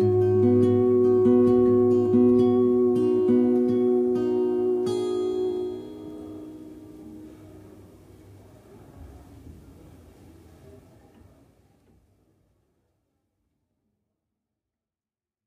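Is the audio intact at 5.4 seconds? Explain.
Yes, the audio is intact at 5.4 seconds, with no fault at that moment.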